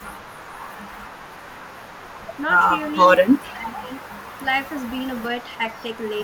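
From the start to 2.41 s there's an echo leak: a faint copy of the speech trailing about 445 ms behind, roughly 30 dB down, likely because the far end's canceller isn't fully scrubbing its loudspeaker pickup. It returns louder, roughly 20 dB down, at 2.95–3.52 s. Then at 3.44–3.9 s the speech is suppressed in double talk, dipping by up to about 10 dB for around half a second, likely because the canceller, confused by both sides at once, ducked everything. The echo comes back at 3.76–4.41 s, about 25 dB down, then as quieter scraps at 4.82–4.91 s, 5.41–5.57 s and 6.2 s, each faint and still sitting 445 ms late.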